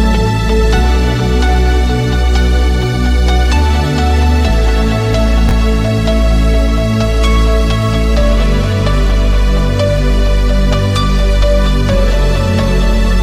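At 5.49 to 5.51 s there is a brief case of chunks out of order. One 10 ms block of audio landed a single chunk late, so it plays after the block that should follow it. Nothing is missing, but the swap leaves three abrupt joins within 20 ms, heard as a tiny jumbled flutter. On the waveform, the trace jumps discontinuously at each join. On a spectrogram, these appear as three thin vertical broadband lines packed closely together.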